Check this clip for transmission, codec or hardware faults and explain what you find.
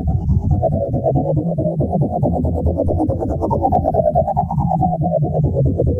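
One hardware fault is present: a phantom power thump. It runs from 2.87 to 2.97 s. A supply voltage was switched on or off while the input was live. That sudden DC step passed through the coupling capacitors as one low-frequency pulse. It is heard as a deep, dull thump under the sound. It peaks at about -18 dBFS. It dies away quickly, decaying over roughly 24 ms.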